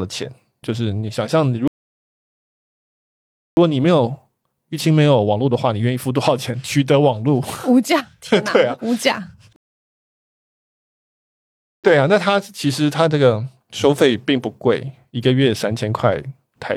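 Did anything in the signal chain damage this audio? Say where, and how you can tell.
Yes. The speech drops to dead silence from 1.68 to 3.57 s and again from 9.56 to 11.84 s, then picks up exactly where it stopped, with nothing missing. That is a rebuffering stall at playback: the player's buffer emptied and waited for data, adding about 1.9 s and 2.3 s.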